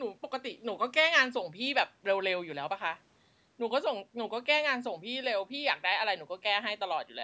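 No technical faults are audible.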